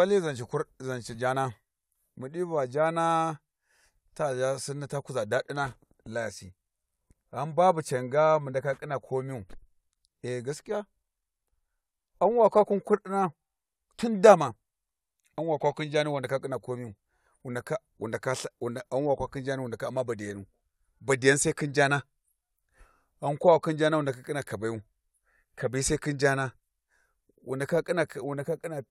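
No technical faults can be heard anywhere in the speech recording.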